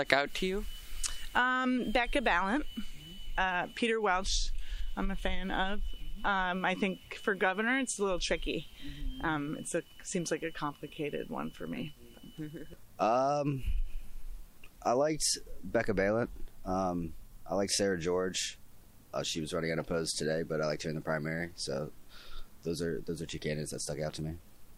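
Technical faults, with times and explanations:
1.78–2.57 s and 8.29–9.28 s, drift correction step: clock-matching software likely changed the playback rate in one jump to rebalance its buffer, so the sound runs 5.78% fast and rises 97.2 cents, almost a semitone, for under a second before snapping back.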